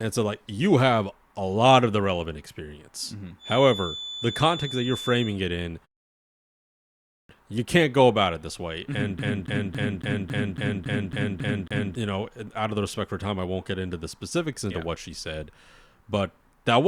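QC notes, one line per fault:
3.38–5.39 s, feedback whistle: a thin 3.5 kHz tone, swelling and fading slowly, sits roughly 10 dB under the speech, likely from a loudspeaker-to-microphone loop held at the edge of feedback, ending before "it in".
6.69–7.29 s, clipped start after a pause: after a 0.91 s silence, speech starts abruptly with about 0.6 s missing while the output device wakes up again.
9.19–11.95 s, CD stuck on one turn: a 276 ms fragment repeats in an even stutter with a brief mute at each jump, as if a skipping disc, before "you know out of".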